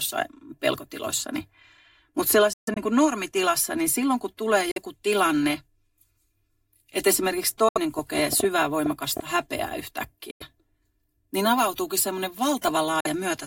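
Throughout this speech recording a hollow, phasey colour comes from channel delay (comb filtering). One channel lags the other by roughly 3 ms, so the mono sum cancels at evenly spaced frequencies starting near 150 Hz. The sound then cuts out and resumes further on, likely Bluetooth dropouts where audio packets arrived too late and were discarded. This happens at 2.53–2.78 s, scattered gaps totalling about 160 ms with the longest about 140 ms, just before "kuin normitilassa niin silloin". It recurs at 4.71–4.78 s after "niin silloin kun tulee", at 7.69–7.78 s after "että esimerkiksi", and at 10.31–10.42 s and 13.00–13.07 s. From 7.99 to 9.20 s a train of clicks runs over the sound: about ten similar pops at an uneven average of 6.6 per second, peaking roughly 10 dB above the signal, likely from interference or a faulty connection.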